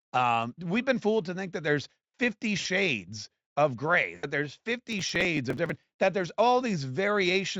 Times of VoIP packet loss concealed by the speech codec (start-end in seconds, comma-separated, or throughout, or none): 2.59-2.66, 4.15-4.25